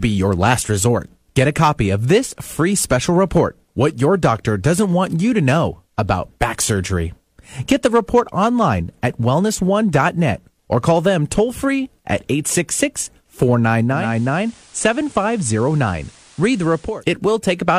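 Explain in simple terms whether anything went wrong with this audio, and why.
The radio lost its digital signal and switched to the station's FM broadcast from 13.88 to 17.05 seconds, a digital radio blending to analogue. The speech turns slightly quieter, with a faint hiss underneath.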